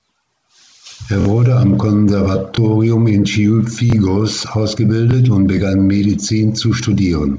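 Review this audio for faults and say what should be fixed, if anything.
Repeated buffer stutters occur at 1.21–1.25 s, just before "wurde am", where one chunk of about 23 ms plays three times, and at 2.55–2.58 s, 3.90–3.92 s and 5.11–5.13 s (just before "und begann"), each played twice. The playback device ran dry and replayed its last block, which fits a 1024-sample buffer. On a waveform, identical segments sit side by side with abrupt joins. A spectrogram shows thin vertical lines at each join, and around 20 to 50 ms of audio goes missing at each event. Enlarging the playback buffer or feeding it from a higher-priority thread would prevent the underruns.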